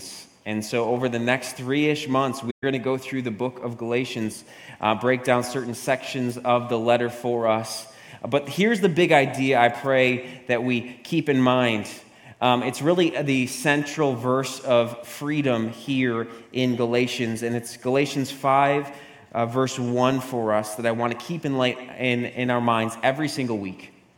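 The audio drops out between 2.50 and 2.64 s, a hole of about 128 ms that points to a short run of consecutive lost frames: AAC frame loss with muting. The decoder filled the missing frames with silence, and because its overlapping transform windows blend each frame into its neighbours, the sound fades down into the gap and back up out of it. Those soft edges distinguish it from a hard sample-level dropout, which cuts off abruptly.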